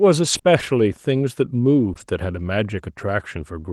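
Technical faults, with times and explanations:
0.33 s and 1.97–2.03 s, lost packet rebuilt from error correction: brief rough, grainy patches with no gap in the sound. At 0.33 s one 20 ms packet was lost, and at 1.97–2.03 s two were lost, 40 ms in all. The decoder played the coarse low-bitrate backup copies that the following packets carried.
0.37–0.45 s and 1.93–1.97 s, short concealed packet loss: a quick smear or wobble, the first about 80 ms long and the second 40 ms. Each 20 ms hole never arrived, so the Opus decoder extended the preceding sound to fill it and then blended back into the real audio.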